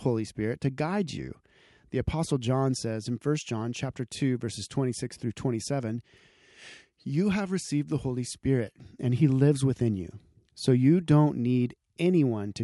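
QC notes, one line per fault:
No faults found in the speech recording. Nothing here calls for a timed entry.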